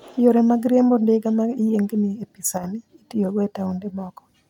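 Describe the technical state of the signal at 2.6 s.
At 2.6 s the speech briefly loses level. The drop runs from 2.58 to 2.64 s, about 60 ms, between "e pi" and "itiyogo e". It is likely a case of one channel dropping out. When one side of a stereo pair goes silent and the pair is folded to mono, the shared content is left at half amplitude. That is a sudden fall of about 6 dB. Here it sounds like a short, sharp dip in loudness that snaps back.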